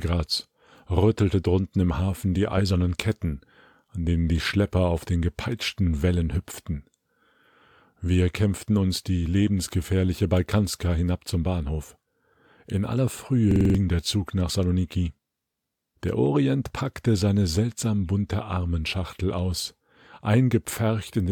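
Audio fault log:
13.51–13.75 s, system hang loop: for about a quarter of a second the output locks onto one 46.44 ms slice of sound and replays it five times, giving a rapid stutter at 21.5 Hz. The system stalled while the audio hardware kept cycling its ring buffer, and the loop length fits a 2048-sample buffer. Roughly a fifth of a second of real audio is lost. The waveform shows identical repeated blocks, and the spectrogram shows evenly spaced vertical seams.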